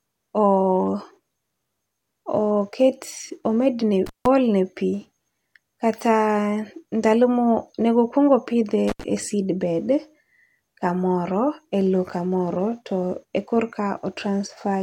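At 4.06 s and 8.88 s, intermittent contact breaks the connection for 160 ms, then 76 ms. The speech drops to faint hiss, seen as a near-flat waveform gap between crackle spikes.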